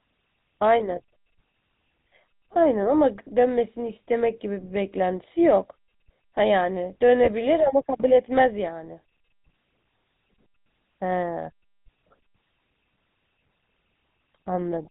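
A speech recording with a buzzy, gravelly roughness throughout and nothing heard above 4 kHz, the plainly audible signature of the GSM full-rate codec, whose sound fits its 13 kbps rate. From 7.24 to 7.30 s a brief rough, metallic ring holds the sound, the sign of lost GSM frames: the decoder repeated the last good frame, a gap that fits a single 20 ms frame.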